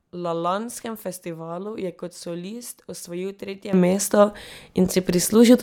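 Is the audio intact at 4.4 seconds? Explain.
No. At 4.4 seconds the speech and its background noise are both about 14 dB louder, a sudden gain jump that starts abruptly at 3.73 s and lasts to the end of the clip. The likely cause is a digital gain change applied between adjacent samples with no ramp.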